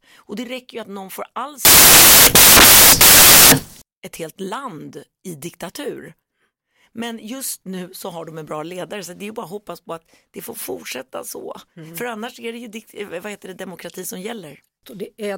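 From 1.65 to 3.82 s the speech collapses into loud white noise: samples built from the wrong bytes, where misassembled bytes turn the jittery low bits into the main signal.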